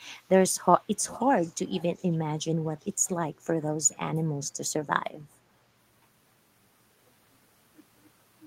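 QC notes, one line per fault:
0.98–2.17 s and 2.78–2.93 s, echo leak: a delayed copy of the speech returns about 312 ms behind the original. The first stretch is roughly 20 dB under the direct speech. The second is a brief, faint scrap, around 35 dB down. The likely cause is a far-end loudspeaker whose echo canceller failed to remove everything its microphone picked up, so the leftover was sent back down the line.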